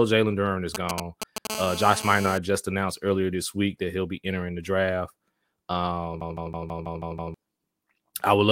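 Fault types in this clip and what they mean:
GSM signalling bursts: A nearby 2G phone was exchanging brief control bursts with the network, and the audio circuit rectified them. From 0.75 to 1.47 s this gives a galloping run of ticks and short 217 Hz buzzes, roughly 5 dB below the speech.
GSM phone buzz: A nearby 2G phone in an active call transmitted continuously at 217 bursts per second, which the audio electronics demodulated. From 1.50 to 2.38 s a steady, raspy 217 Hz buzz with many harmonics sits about 11 dB under the speech, ending before "just announced earlier this".
CD stuck on one turn: A scratch made the player's laser jump back one track at the same point on each rotation. From 6.21 to 7.34 s the same 162 ms of speech repeats seven times, each repeat separated by a brief mute, producing a fast, even stutter.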